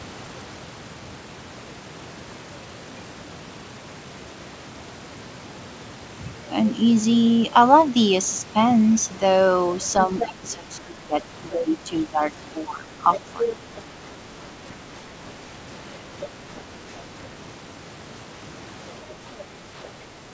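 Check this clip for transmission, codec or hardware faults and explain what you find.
Two echo-control faults appear in this speech.

Speech suppressed in double talk: the talker dips in pieces from 10.07 to 13.01 s, for roughly a second and a half in total, at worst about 15 dB down. Shorter dips follow at 13.73 to 14.0 s (about 10 dB) and from 19.06 s to the end (about 5 dB). The likely cause is an echo canceller that couldn't tell near speech from loudspeaker echo and turned both down.

Other side's voice leaking through: a second voice appears at 10.19 to 10.25 s (about 5 dB below the talker), at 13.13 to 13.81 s (about 10 dB below), at 16.21 to 16.61 s (about 15 dB below) and faintly at 19.1 to 19.88 s (about 25 dB below). It is likely loudspeaker sound the echo canceller failed to remove from the microphone.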